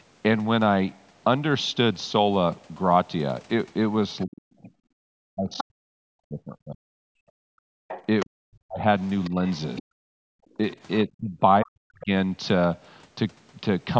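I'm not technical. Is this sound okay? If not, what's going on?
No. This call has three echo-canceller faults.

Other side's voice leaking through: the phone's echo canceller likely failed to remove the other caller's voice, which the microphone picked up from the loudspeaker. You can hear it as a fainter second voice from 4.2 to 5.63 s, from 7.88 to 9.83 s, and as a brief scrap at 12.0 s.

Speech suppressed in double talk: when both people spoke at once, the canceller likely couldn't tell the two apart and turned everything down. Between 4.25 and 12.1 s the main speaker keeps dipping or cutting out in pieces, about four seconds in total.

Background gated by the echo canceller: while the loudspeaker played, the canceller shut the microphone down hard for moments at a time. The room sound drops out from 4.98 to 5.05 s, from 7.1 to 7.88 s, and from 10.39 to 10.57 s, then returns.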